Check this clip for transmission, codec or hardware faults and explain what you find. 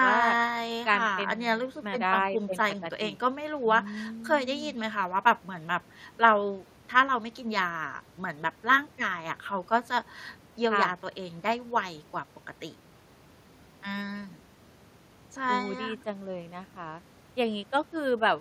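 No transmission, codec or hardware faults are audible anywhere in this speech recording.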